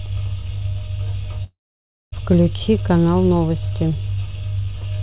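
From 1.44 to 2.14 s the speech breaks off. The last sound is stretched into a fading buzz for about a tenth of a second, then roughly 0.56 s of silence follows, and the speech resumes with that stretch missing. This is likely a long network dropout that the receiver concealed until it gave up. On a spectrogram, smeared horizontal bands fade into a blank column; the waveform decays to a flat line. Nothing appears above 4 kHz, fitting a narrowband call codec.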